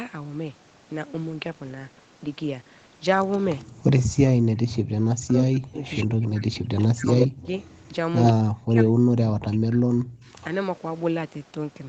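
Echo leak, 3.32 to 4.02 s: a faint copy of the voice trails it by 125 ms, about 15 dB down. A far-end echo canceller likely let loudspeaker pickup through.

Speech suppressed in double talk, 4.05 to 4.46 s: the voice drops by up to about 40 dB for roughly 0.4 s, likely because the canceller muted both talkers while they overlapped.

The same suppression returns from 5.09 to 7.52 s, cutting the voice in pieces for about 1.5 s in total.

Echo leak, 5.85 to 8.32 s: a much stronger echo, only about 5 dB below the voice, repeats it 82 ms late. Residual loudspeaker pickup is likely being sent back.

Speech suppressed in double talk, 8.33 to 10.29 s: the voice again dips and breaks up, by up to about 40 dB, over about 1.5 s.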